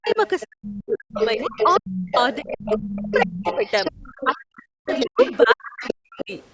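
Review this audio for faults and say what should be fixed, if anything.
The talker's speech keeps dipping and breaking up in pieces, with the deepest cuts near 40 dB: briefly at 0.0 to 0.17 s, then 0.49 to 2.08 s, 2.41 to 3.65 s and 4.24 to 6.32 s. The last stretch loses the most, around a second and a half in total. This is speech suppressed in double talk. While both sides were talking, the echo canceller likely couldn't tell the talker from the loudspeaker echo and turned everything down. Tuning the double-talk detector so that near-end speech holds the suppressor back would prevent it.

A second, fainter voice runs underneath, about 10 dB below the talker. It is present from 0.06 to 4.41 s and returns at 4.87 to 5.47 s and 5.84 to 6.46 s, in audio that already has nothing above 8 kHz from normal call processing. This is the other side's voice leaking through. Its playback on the talker's loudspeaker was likely not fully cancelled before reaching the microphone. 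Better echo-path modelling, or using a headset, would prevent it.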